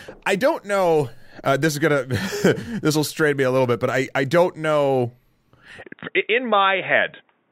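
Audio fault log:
5.81–7.51 s: input switched to a poorer device. The sound abruptly narrows, with nothing above 3.8 kHz, turning dull and boxy with no gap at the switch and no level jump. This is likely a change to a band-limited microphone or headset call profile, which adds faint new background noise.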